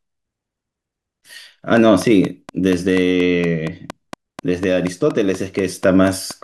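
From about 1.77 s right through to 6.32 s there's a train of clicks running over the speech: sharp, near-identical ticks at a steady 4.19 per second, roughly twenty in all. They poke out a few dB above the talking and carry straight on through the pauses, so they're riding on top of the audio, not coming from it. Likely cause is interference from nearby gear or a faulty connection or power supply.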